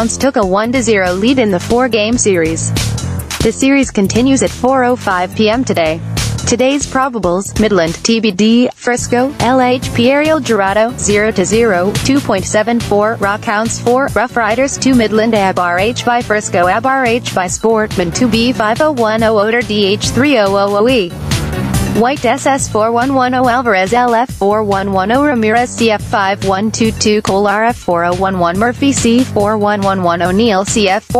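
Gain pumping runs through the whole clip. The gain swings by around 15 dB, squashing loud and soft together. The likely cause is input gain set far too high, with a fast limiter clamping each peak.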